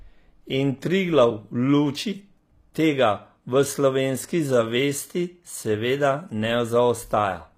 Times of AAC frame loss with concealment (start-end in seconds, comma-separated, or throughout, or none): none